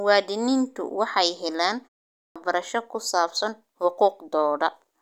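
At 2.16 s, just after "waxay helaan" and a 0.36 s pause, the speech resumes abruptly, its opening 196 ms swallowed before "ku saabsan". This is a clipped start after a pause: the output device dozed during the silence and took time to wake.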